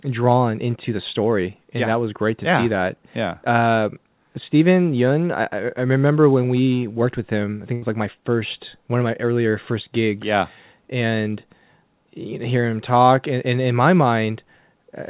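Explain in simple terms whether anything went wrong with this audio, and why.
Around 7.74 to 7.84 s there's a burst of packet loss. About 80 ms of the speech arrived too late or not at all, so the receiver stretched the last sound and faded it out, then jumped ahead with that bit missing.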